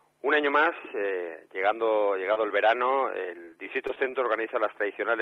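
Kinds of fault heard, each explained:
Short concealed packet loss: around 2.33 s, roughly 20 ms of audio never arrived, so the receiver extended the previous sound to cover it, leaving a brief smear.
Short stall from a late packet: at 2.77 s a packet showed up late, the buffer emptied, and the last sound was held about 16 ms too long before continuing.
Repeated packet loss (robotic sound): from 3.45 to 4.15 s, five brief holes (the longest 23 ms) were each patched from the previous sound, giving a choppy stretch with bits missing.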